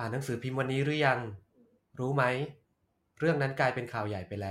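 Nothing in this bit of speech jumps out as a technical fault, so there's really nothing to flag here.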